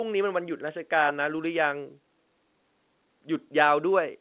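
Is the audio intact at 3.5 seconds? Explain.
Yes, the speech at 3.5 seconds is intact, carried cleanly through its telephone-band G.711 coding with no dropout, click or distortion at that moment.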